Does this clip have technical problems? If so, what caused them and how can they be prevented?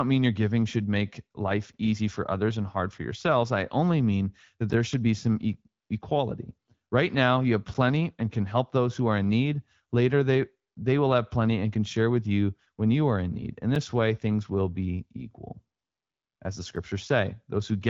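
Yes. A gap between chunks recurs every 3.0 s, at 1.73, 4.73, 7.74, 10.75, 13.75 and 16.76 s. Each is a hard-edged hole of 6.5 ms, such as the one between "I only mean that" and "should be some". The audio was delivered in 3-second chunks, and a short silence was left at each join instead of the next chunk continuing seamlessly. To prevent it, trim codec padding and schedule each chunk to begin exactly where the previous one ends.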